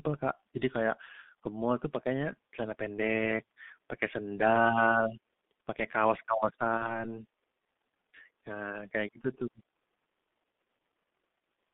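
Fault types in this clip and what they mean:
G.723.1 codec: A low-rate telephony codec at 6.3 kbit/s. The line passes only 200 Hz to 3.6 kHz. Speech sounds heavily muffled and hoarse, with smeared consonants.
VoIP packet loss concealed by the speech codec: From 6.77 to 7.05 s, the decoder fills a 30 ms gap, fitting one lost frame. The voice is stretched from the last frame, then weakened, before recovering.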